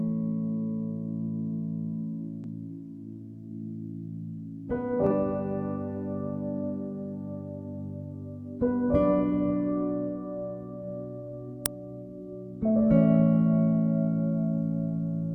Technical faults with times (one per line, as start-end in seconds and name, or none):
2.42-2.47 damaged data in a compressed stream
5.07-5.12 damaged data in a compressed stream
11.66 uninitialised buffer